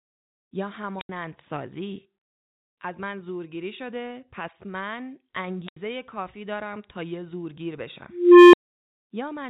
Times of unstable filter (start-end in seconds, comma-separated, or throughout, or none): 0.85-1.09, 5.48-5.76, 8.09-8.61